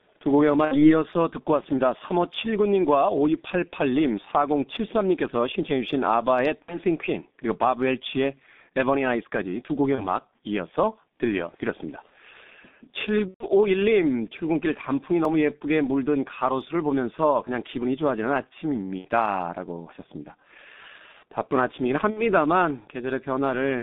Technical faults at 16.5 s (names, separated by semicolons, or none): G.723.1 codec